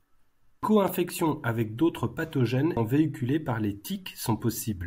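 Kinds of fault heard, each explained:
Repeated buffer: New audio arrived late, so the playback device sent out its last block again rather than waiting. At 0.88 s, just before "avec d'autres pathogènes", one block of speech about 1.3 ms long plays three times in a row. That fits a 64-sample buffer. Each repeat meets the next with a hard join. The block is so short that the repeats merge into a brief click or buzz rather than a stutter. Almost no speech is lost.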